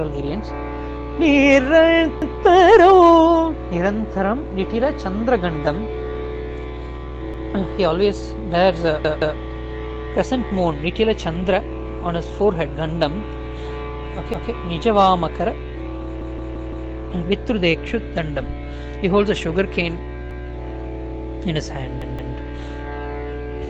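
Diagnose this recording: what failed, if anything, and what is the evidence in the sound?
Short stutters where a piece of sound about 171 ms long plays again after a hard join, at 2.22, 7.34, 9.05, 14.34, 16.21, 20.31 and 22.02 s, four extra times at 16.21 s. This is a repeated buffer at the driver or buffer stage: late audio forced a replay of the last block, which fits an 8192-sample buffer.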